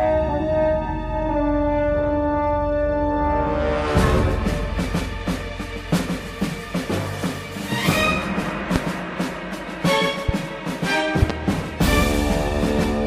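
Loud pops at 8.76–8.79 s, 10.29–10.32 s and a double pop at 11.22–11.32 s jump well above the sound, likely voltage pulses from a switch, plug or static.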